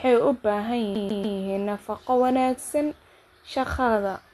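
From 0.95 to 1.38 s the speech catches in a CD stuck on one turn. A scratch keeps knocking the laser back a track. The same 144 ms slice plays three times. A brief mute marks each jump, giving a fast, even stutter.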